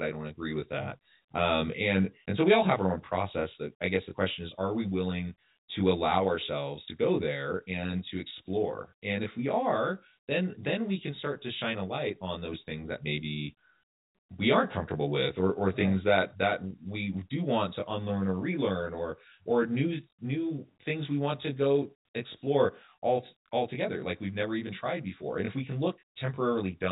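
Speech, carried over G.711 telephone coding, has channel delay (comb filtering) throughout. One channel lags by roughly 20 ms before mono summing, cutting fixed, closely spaced notches from around 20 Hz upward. Unlike the telephone band limit, it sounds rough and slightly doubled rather than muffled.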